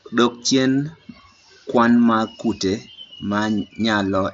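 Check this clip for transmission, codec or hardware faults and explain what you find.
No faults turn up anywhere in the clip.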